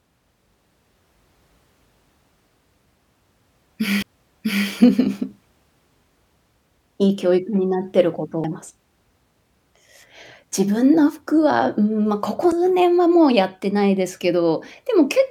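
A brief tick and a near-instant dropout of a few milliseconds occur at 4.02, 8.44 and 12.52 s, each time with the speech resuming from a different point. These are CD skips: the laser jumped to another turn of the disc's spiral, muting briefly before playback continued.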